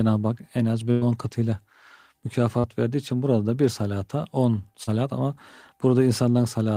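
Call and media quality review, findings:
Burst of packet loss, 0.91–1.03 s: about 100 ms lost in the network, and the decoder's concealment holds the last sound and fades it. On a spectrogram, flat, frozen bands taper off before an abrupt restart.

Short concealed packet loss, 2.59–2.65 s and 4.83–4.89 s: about 40 ms missing each time. The decoder extrapolates and cross-fades, leaving brief smears. On the waveform, short, over-smooth, repetitive segments appear.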